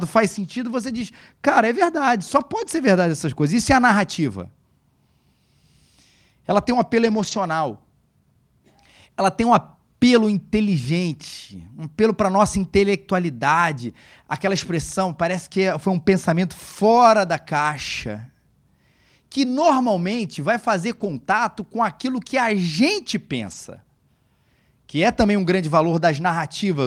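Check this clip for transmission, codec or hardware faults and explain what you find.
Lost packets rebuilt from error correction occur at 2.57–2.67, 7.03–7.37, 14.57–14.59 (before "parece que é foi"), 16.91–16.97, 19.59–19.69, 20.91–21.09 and 23.47–23.53 s. The following packet's low-bitrate copy fills each loss, so the speech briefly turns rough and noisy instead of dropping out or smearing as with plain concealment.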